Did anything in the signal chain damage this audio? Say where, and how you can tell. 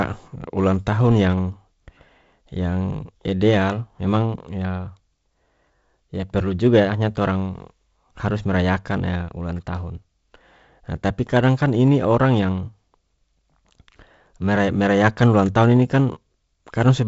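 No, nothing here points to damage: the speech has simply gone through G.722 wideband telephone coding, which at 48 kbit/s leaves a light grain from the coarser lower band and nothing above about 7.7 kHz, just as that codec is built to do.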